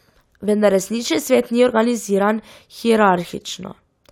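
No dropouts, glitches, clipping or other technical faults are audible anywhere in the speech.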